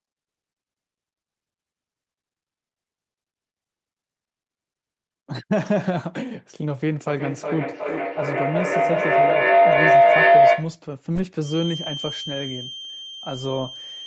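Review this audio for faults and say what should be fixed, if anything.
From 7.06 s to 10.84 s a feedback howl builds around roughly 700 Hz, peaking about 11 dB above the speech and pulsing about every 0.4 s. Each pass through the microphone-to-loudspeaker loop adds level, so the tone grows until the loop breaks.

From 11.39 s to the end, a thin, steady feedback whistle at 3.2 kHz sits roughly 10 dB below the speech, swelling and fading slowly in level. The likely cause is a speaker-to-microphone loop held just at the feedback threshold, sustaining one frequency without running away.

To prevent both, keep only one device joined to the call per room, or mute the others' microphones and loudspeakers.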